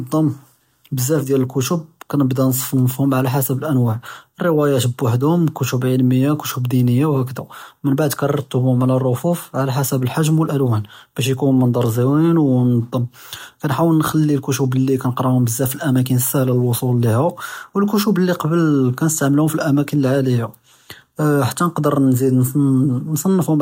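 No technical faults can be heard anywhere in the recording.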